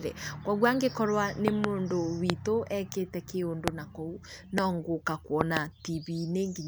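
Five loud pop events cut through the speech: a double pop from 1.48 to 1.66 s, single pops at 2.30 to 2.32 s, 3.68 to 3.70 s and 4.58 to 4.60 s, and another double from 5.41 to 5.59 s. Each peaks about 20 to 25 dB above the speech, which continues underneath. The sharp onset is most likely a sudden voltage step, such as static or a switching glitch, shaped by the downstream circuitry.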